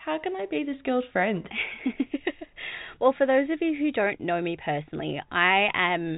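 Telephone-band speech, with no technical faults to be heard.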